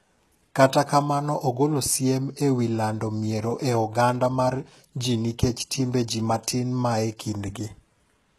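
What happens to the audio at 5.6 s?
At 5.6 s the speech carries the same coding damage heard across the whole clip, likely HE-AAC compression at a very low rate, consistent with roughly 16 kbps. Only the lower spectrum is coded directly. The treble is rebuilt by copying lower bands upward under a coarse envelope, so its harmonics don't line up with those below. Sibilants sound gritty and metallic, the damage is plainly audible, and nothing remains above 12.4 kHz.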